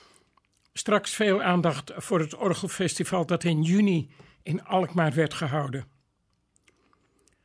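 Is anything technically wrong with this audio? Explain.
No, nothing technically wrong stood out on listening to this audio.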